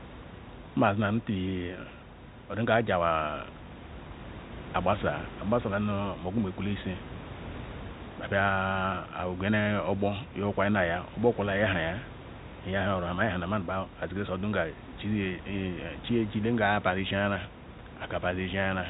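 Nothing here stands out as a fault: the room noise sits about 15 dB below the speech, and the telephone coding passes nothing above 3.8 kHz, which fits ordinary G.711 at 64 kbps, with its quantisation grain faint at most.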